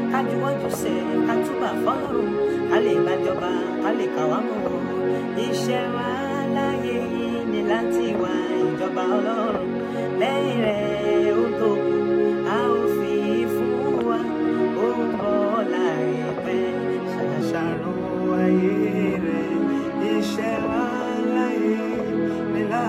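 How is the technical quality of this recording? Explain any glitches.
The recording has one clear fault, a section at the wrong speed. From 0 to 17.4 s, playback was likely clocked wrong, running at 1.12 times normal speed, so the sound is hurried and raised by about two semitones.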